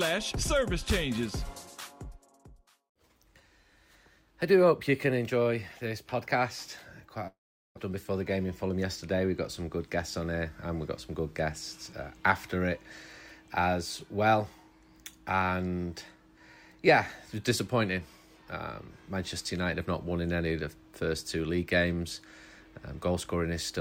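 Around 7.27 s the audio cuts out until 7.79 s. The last sound gets stretched into a fading buzz, then there's roughly 0.4 s of silence, and that 0.4 s of material never comes back. That's most likely a long network dropout, with the receiver concealing the gap before giving up. Right after, from 7.89 to 8.85 s, you get a jitter buffer speed-up. The receiver catches up on the extra delay of around 70 ms that built up by trimming tiny pitch-period slices, so the audio runs about 108% fast at unchanged pitch and feels a bit rushed.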